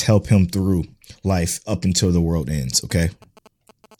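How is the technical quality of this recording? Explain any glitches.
Interference from a nearby 2G phone mars the recording near the end, in two stretches.

From 2.75 to 3.86 s you get GSM signalling bursts. The phone is only exchanging short control bursts with the network, not carrying a call, and the recording circuit rectifies those radio pulses into audio. What comes through is that galloping dit-dit-dit of brief 217 Hz buzzes, sitting roughly 25 dB below the speech.

Then at 3.91 to 3.95 s there's a short hit of GSM phone buzz, this time with the phone in call mode, transmitting its 217-per-second bursts continuously. Rectified, that turns into a hard, raspy 217 Hz buzz loaded with harmonics, about 27 dB under the speech and unrelated to it.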